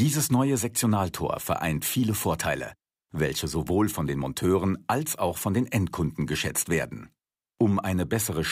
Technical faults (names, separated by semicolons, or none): none